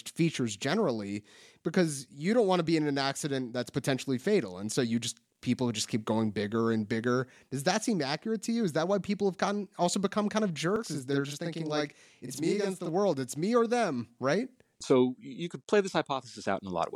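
Speech, with a channel delay (doubling) from 10.76 to 12.89 s: one channel runs about 43 ms late, fitting a 2048-sample buffer, and the mono sum yields an equal-level slap echo. The waveform shows each transient repeated 43 ms later, and the spectrogram shows comb notches spaced roughly 23 Hz apart.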